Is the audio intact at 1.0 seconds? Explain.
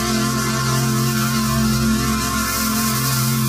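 Yes, the audio is intact at 1.0 seconds, with no fault present at that moment.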